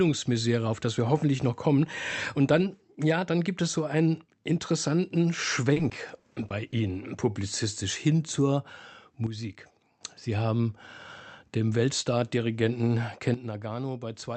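From 5.73 to 6.74 s there is repeated packet loss (robotic sound): eight short gaps, the longest 30 ms, with about 80 ms of audio missing. The receiver patches each hole by extending the preceding sound, about 150 ms in all, so the stretch turns choppy, with pieces missing.

At 9.27 s a sudden gain jump drops the level by about 9 dB until 10.01 s, and at 13.34 s another cuts it by about 10 dB through to the end. The sound and the background noise fall together in a single step, likely a digital gain change applied without a ramp.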